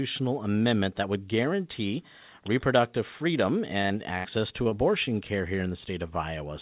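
At 3.82 s a packet arrived late and the jitter buffer ran empty. The receiver stretched the last sound for about 20 ms, then carried on from the same point, giving a brief held sound with nothing lost.

Immediately after, from 3.86 to 3.92 s, short concealed packet loss dropped about 40 ms of audio. The receiver extrapolated the preceding sound across the hole, which comes through as a quick smear.

From 4.18 to 4.26 s a burst of packet loss removed about 40 ms outright. Concealment spans roughly 60 ms with a continued sound that fades down, and the speech resumes further along with that piece missing.

Three more short concealed packet losses follow, at 4.64 to 4.67 s, 4.69 to 4.73 s and 5.05 to 5.10 s. Each drops about 20 ms of audio, filled with roughly 11, 19 and 17 ms of extrapolated audio, heard as small wobbles. The last also stretches the timing slightly.

Throughout, the call path's band limit leaves nothing above 4 kHz, which fits a G.711 A-law link at 64 kbps.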